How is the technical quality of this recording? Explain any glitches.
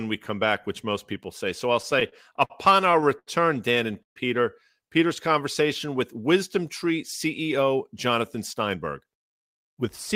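The recording has network delivery problems: two bursts of stuttering, one brief dropout, and a stretch of hurried speech near the end.

Between 1.73 and 2.52 s, and again between 2.92 and 3.29 s, packets kept arriving late, so the jitter buffer ran dry repeatedly. These repeated stalls (stutter) were bridged by extending the last sound: seven gaps filling 123 ms, then four gaps filling 109 ms, the longest 77 ms. Nothing is lost, but the speech drags and judders.

From 4.03 to 4.18 s the sound holds briefly and then drops to about 120 ms of silence before resuming where it stopped. This is likely a call audio freeze, with delayed packets leaving the receiver nothing to play. It inserts a 131 ms gap.

From 7.76 to 9.84 s a jitter buffer speed-up trims the built-up backlog. The receiver cuts many tiny pitch-period slices, about a tenth of a second in total, so the speech runs at 105% speed at unchanged pitch and sounds slightly rushed.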